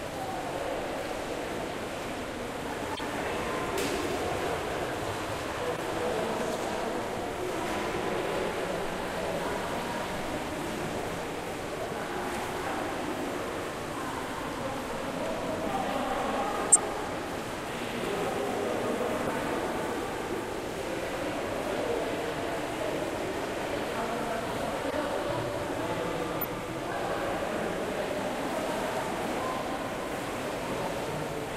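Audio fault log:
2.95–3.00 s, 5.76–5.85 s, 16.72–16.79 s, 19.26–19.30 s, 24.88–24.93 s, 26.39–26.44 s: corrupt frame decoded. Six brief bursts of wrong sound cut into the audio. Each lasts roughly 40 to 90 ms and covers a few codec frames. Damaged frames were played anyway. Misread gains and codes put energy at the wrong frequencies. The loudest burst is at 16.72 s, at about -10 dBFS. The others sit near -15 to -25 dBFS. At 19.26 s, about 19 ms of audio is also skipped, leaving a short hole.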